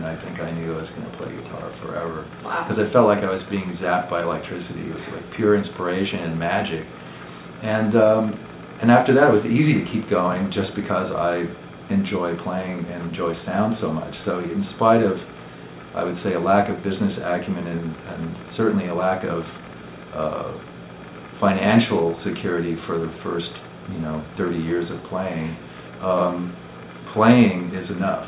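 No technical faults are audible anywhere in the recording.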